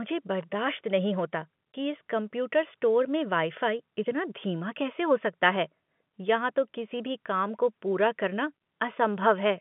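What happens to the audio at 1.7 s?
At 1.73 s, between "बर्दाश्त नहीं होता" and "कि इस कंप्यूटर स्टोर", packet loss filled with silence cuts a short hole, consistent with one lost 20 ms packet replaced by silence. Unlike concealed loss, which smears or repeats sound, this gap is dead quiet with hard edges.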